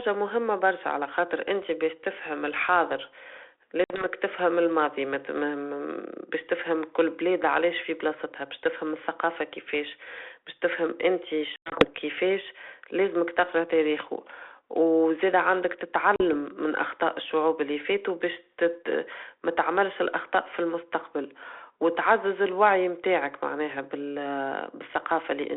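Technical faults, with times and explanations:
3.84–4.07 s, 11.56–11.87 s, 16.16–16.22 s: packet loss on an ADPCM call. Hard silent gaps totalling 60, 120 (scattered over 160) and 40 ms break the speech. The G.726 decoder's predictor and step size then mismatch the sender's, so speech returns slightly distorted.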